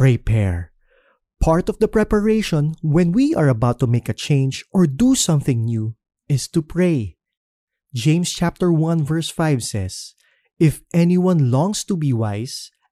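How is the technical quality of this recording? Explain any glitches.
Nothing stood out as a technical problem on listening to this recording, so there are no glitches to explain.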